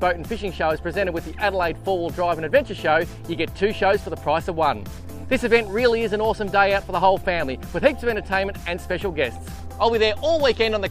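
No technical faults are audible.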